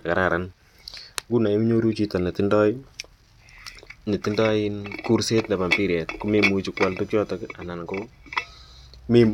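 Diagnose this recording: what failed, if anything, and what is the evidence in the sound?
A DECT cordless phone buzz enters at the analogue stage from 5.42 to 7.42 s. It is a thin, steady 100 Hz buzz, faint beneath the speech. Radio bursts from a nearby DECT transmitter arrive every 10 ms, and the audio circuit rectifies them.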